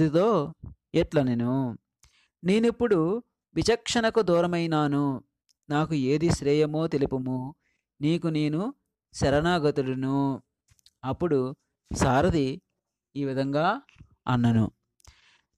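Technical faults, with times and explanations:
Nothing technical stands out here; the audio just carries on without a hitch anywhere along the way.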